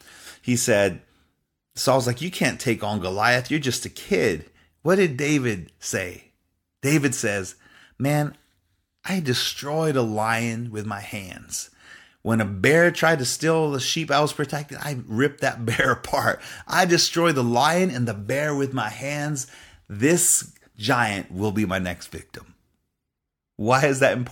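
A speech recording with nothing technically wrong to report.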